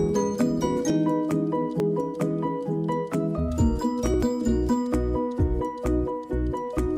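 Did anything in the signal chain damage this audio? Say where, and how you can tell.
Yes. There are three short skips at 0.9 s, 1.8 s and 4.14 s, each a point where the sound jumps forward by roughly 20 ms with no gap of silence. The likely stage is the driver or buffer, where a dropped buffer (overrun) occurs because the capture software fell behind and the hardware overwrote a block before it was read. On a waveform each point shows an abrupt discontinuity; a spectrogram shows a thin vertical broadband line there.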